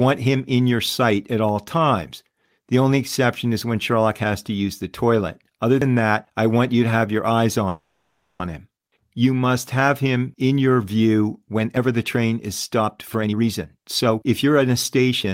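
A speech recording with three kinds of transmission or recording fault. Audio missing between chunks shows up as two abrupt skips, at 5.82 s just before "that I want you" and again at 11.77 s. Each drops roughly 50 ms, and the two sides are butted together with no silence between them. The exact 6 s spacing points to a recorder or processor that likely handles the audio in 6-second chunks and loses a sliver at each handover. Unlike a freeze, nothing is inserted here. Material simply vanishes, so a syllable can sound clipped. A call audio freeze follows from 7.69 to 8.42 s, right after "to have your eyes". The last sound is stretched into a fading buzz for about 0.71 s, and the final 0.17 s or so decays into silence. When sound resumes it picks up exactly where it stopped, so nothing is lost and everything afterwards is pushed later by 0.71 s. That is the opposite of the chunk gaps, and the likely cause is delayed packets draining the jitter buffer. 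Finally, a jitter buffer speed-up runs from 12.80 s, after "the train is", to 15.32 s. Speech plays at about 121% speed with its pitch unchanged, and roughly half a second is trimmed away as many tiny pitch-period cuts rather than one audible skip. The result sounds hurried, not chopped.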